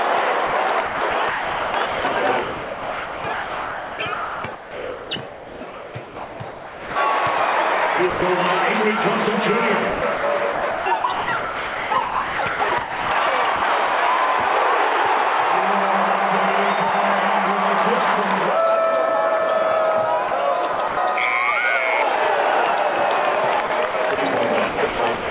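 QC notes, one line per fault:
0.47–6.96 s, 9.90–13.62 s, 20.28–20.97 s, 23.67–24.18 s, 24.69 s to end: sound chopped by the voice detector. The sender likely kept toggling transmission off and on, so quieter parts were swapped for comfort noise: about 4.6 s, 2 s, 0.18 s, 0.09 s and 0.39 s respectively. The sound stutters.
8.10–8.22 s: sound dropped by the voice detector. The detector likely mistook a quiet stretch for background and stopped sending for 120 ms. The receiver filled the gap with comfort noise, so the sound briefly gives way to steady noise or near silence before returning.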